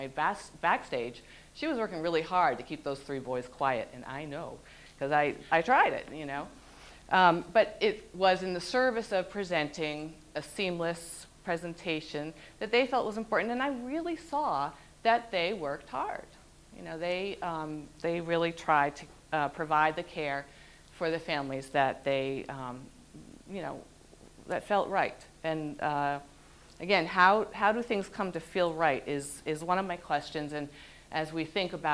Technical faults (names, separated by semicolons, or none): none